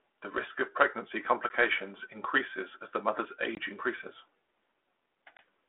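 Three hard-edged gaps of silence, at 1.49 s after "risk of pregnancy", 3.55 to 3.59 s after "increases as the mother's", and 5.37 to 5.39 s, each followed by slightly distorted speech. This is packet loss on an ADPCM call: 10 to 20 ms went missing, knocking the decoder's predictor and step size out of step with the sender's.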